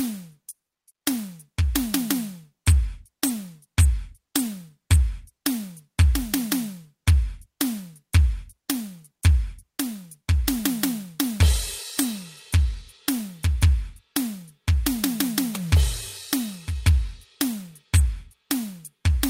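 There are no technical faults to describe in this music at any point.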